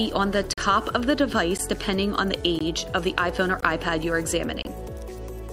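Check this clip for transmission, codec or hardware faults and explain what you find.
There's one problem here: a gap between stream segments, recurring roughly once a second. The holes fall at 0.53–0.58 s (about 43 ms), 1.58 s (13 ms), 2.59 s (17 ms), 3.61 s (18 ms) and 4.62–4.65 s (26 ms). The segment timestamps don't quite line up, so the player pads each boundary with silence, which fits 1-second segments. You hear brief, hard-edged dropouts in the sound, but nothing is actually lost.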